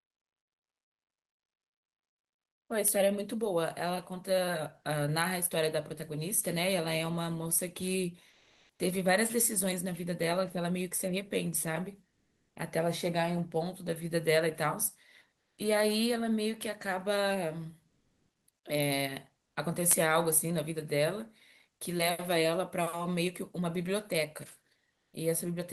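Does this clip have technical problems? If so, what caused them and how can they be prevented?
Yes. Comfort noise in place of the background, likely from the sender's codec pausing transmission during silence: at 8.29–8.79, 12.09–12.55, 15.35–15.57, 17.89–18.47, 19.47–19.55 and 24.95–25.13 s, the real background becomes steady, featureless noise, from about 16 dB quieter to about 5 dB louder. Turning off discontinuous transmission in the sending encoder prevents it.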